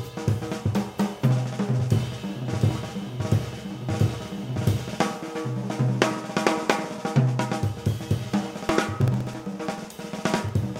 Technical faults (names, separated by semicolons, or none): periodic USB or driver dropouts